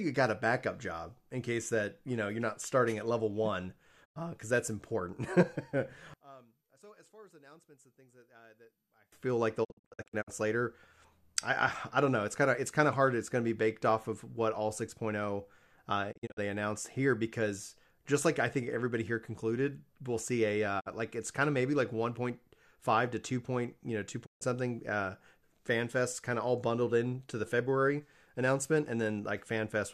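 Speech runs through five digital broadcast dropouts: after "starting at level one" at 4.04–4.17 s, at 9.63–10.29 s as scattered holes of up to 48 ms, at 16.11–16.39 s just before "they announced here because", at 20.79–20.88 s between "concluded we'll see a" and "like it's kind of", and at 24.25–24.43 s. Each hole fades out in about 20 ms to silence, as a muting receiver does, with no smearing or repeated sound to fill the gap. From 6.14 to 9.12 s the mono sum drops by about 30 dB and turns faint. One channel inverted is the likely cause. It differs from a plain level drop because the centred speech cancels and only the faint mismatch between the channels remains.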